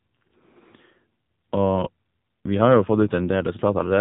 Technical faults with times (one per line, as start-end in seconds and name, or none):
0.00-4.01 AMR narrowband mobile codec